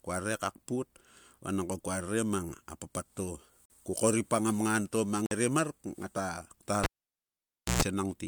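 Speech recording with two short dropouts, at 3.65 s and 5.26 s, where the sound cuts to silence for 45 ms and 50 ms and then carries on. These are likely Bluetooth stalls: interference delayed packets, the receiving buffer emptied, and playback paused until the retransmitted data arrived. From 6.84 s to 7.82 s the cable was pulled and plugged in again. A pop opens roughly 0.94 s of near silence, a 0.12 s burst of 60 Hz mains buzz follows as the plug tip makes partial contact, and a second pop marks the sound's return.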